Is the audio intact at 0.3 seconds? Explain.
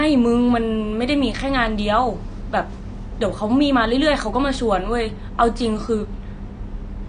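No. At 0.3 seconds the speech carries AAC compression damage, present from start to finish. Nothing is audible above 9.8 kHz, so the sound is dull, and sibilants and sustained sounds take on a warbly, fizzy smear. The likely cause is AAC-LC coding at a low bitrate, around 32 kbps. That leaves too few bits for the spectrum, so the encoder drops the top band and quantises the remaining frequency lines coarsely, thinning or noise-filling some bands.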